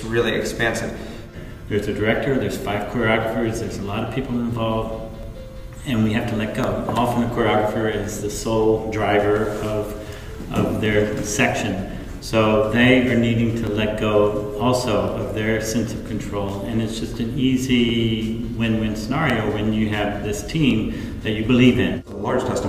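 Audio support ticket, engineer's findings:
Regular click/pop every 1.41 s, 1.02 to 22.12 s, about fifteen in all. Likely clock drift buffer slips: two unsynced device clocks, roughly 500 ppm apart, so the buffer drifts until a few dozen samples drop or repeat.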